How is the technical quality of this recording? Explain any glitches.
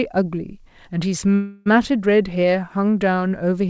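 The recording has one glitch: a call audio freeze from 1.35 to 1.68 s. Packets were likely delayed, so the receiver stretched the last sound into a fading buzz or hiss for about 310 ms, then resumed with nothing lost. On a spectrogram this shows as flat, smeared harmonics, and the waveform envelope decays across the gap. The call path's G.722 coding leaves the spectrogram empty above 8 kHz.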